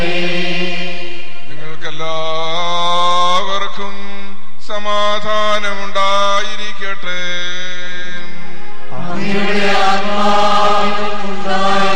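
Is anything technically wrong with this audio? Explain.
No, nothing technically wrong turns up here; the audio runs along without any problems worth flagging.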